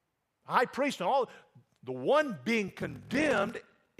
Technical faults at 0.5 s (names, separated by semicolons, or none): none